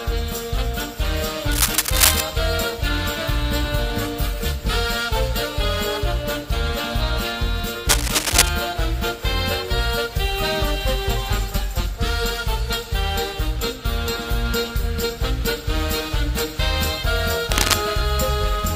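A worn cable or connector was likely moved, its contact resistance jumping about. Cable scratch noise results: rough rustling bursts from 1.52 to 2.21 s, about 5 dB above the sound, and from 7.89 to 8.49 s and 17.52 to 17.74 s at roughly equal level.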